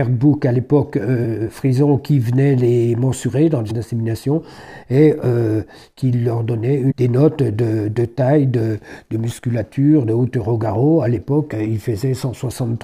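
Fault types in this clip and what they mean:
Damaged data in a compressed stream: corrupted bytes make the decoder misread frames and lose sync, giving brief glitches at 3.69 s and 6.90–6.92 s. A spectrogram shows narrow vertical smears of broadband or garbled energy; the waveform shows an abrupt, ragged discontinuity.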